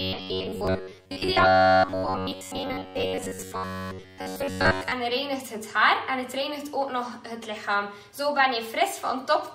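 A rigid metallic buzz near 94 Hz overlays the sound from 0.01 to 4.92 s, likely robotic sound from repeated short buffers: roughly 10.7 ms loops replace most of the real audio. Small skips at 0.67 s and 4.67 s come from overlap between stream segments, where overlapping 2 s segments were trimmed and the waveform jumps.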